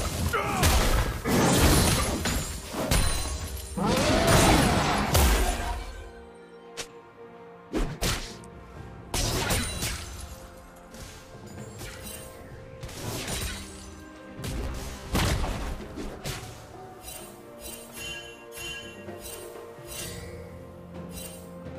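From 14.64 to 15.10 s the sound turns into a rigid, metallic buzz near 66.7 Hz. This is robotic sound from repeated short buffers. A 15 ms chunk was likely looped while fresh audio was missing. Something like two-fifths of that stretch is repeats.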